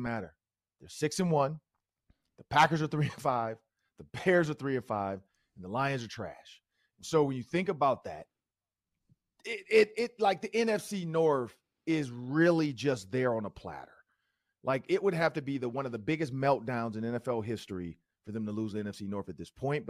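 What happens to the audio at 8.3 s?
At 8.3 s the speech carries on intact, with no dropout, glitch or other fault at that moment.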